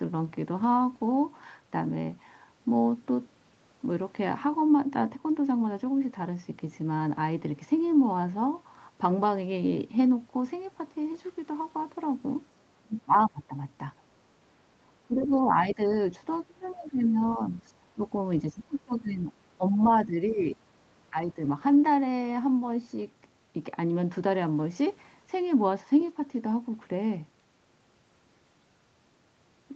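From 12.83 to 13.54 s, 14.85 to 15.91 s, 16.47 to 17.55 s, 17.95 to 18.0 s, 18.43 to 20.61 s and 21.11 to 21.38 s, the speech dips and breaks up, by as much as roughly 25 dB. This is speech suppressed in double talk, likely because the echo canceller could not separate the local talker from the loudspeaker echo and attenuated both. At 14.04 to 14.24 s, the background is gated by the echo canceller: the room sound drops about 12 dB while the loudspeaker plays, then returns.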